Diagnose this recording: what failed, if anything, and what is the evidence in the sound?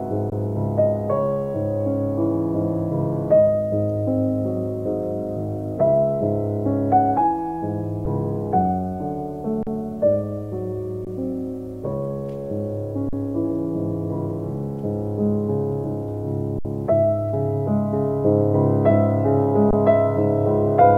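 The playback buffer failed with repeated underruns and held samples. The sound freezes flat at 0.30 to 0.32 s, 8.05 s, 9.63 to 9.67 s, 11.05 to 11.07 s, 13.09 to 13.13 s, 16.59 to 16.65 s and 19.71 to 19.73 s. Gaps run from about 8 to 60 ms. Each time, the buffer emptied and the converter held its last value. Nothing seems lost. Playback resumes where it stopped, so the restarts are soft.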